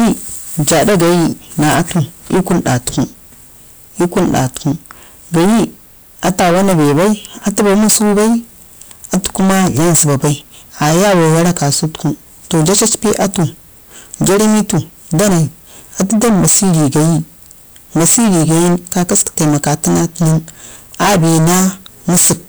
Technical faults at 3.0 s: hard clipping

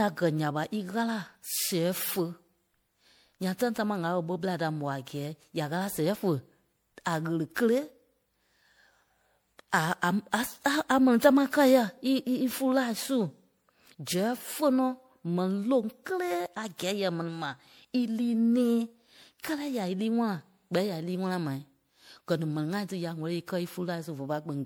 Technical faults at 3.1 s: generation loss

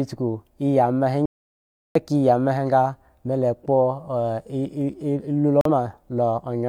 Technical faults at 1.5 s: audio dropout to silence

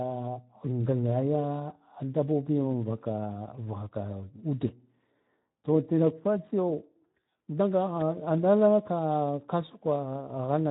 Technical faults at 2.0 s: Speex codec

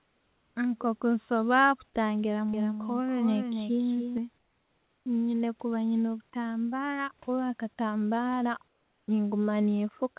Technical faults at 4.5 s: comfort noise in place of the background

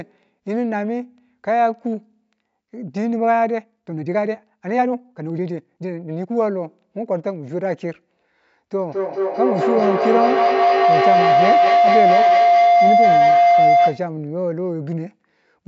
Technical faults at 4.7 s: time-stretched section

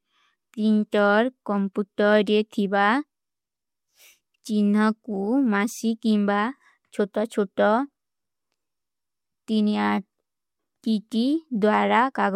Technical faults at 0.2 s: clock slip clicks

